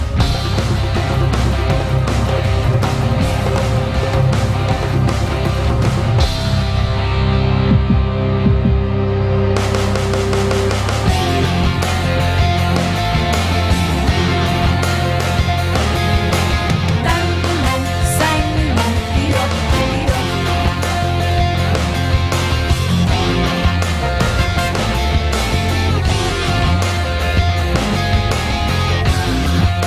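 There are no technical faults to describe in this audio.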